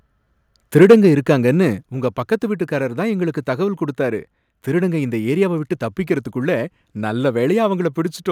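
From 0.77 to 0.95 s the speech shows microphone overload: the peaks sit flat against the converter's limit, with around a tenth of samples clipped, giving a harsh, crackly edge. The input was likely driven about 4 dB too hot. The waveform shows squared-off tops, and the spectrogram shows broadband smearing up into the high kHz.

Right inside that burst, at 0.83 s, the level drops by about 3 dB, and at 1.83 s by about 5 dB more. This is likely the microphone volume being stepped down automatically. Voice and background fall together, appearing as abrupt steps in the waveform envelope.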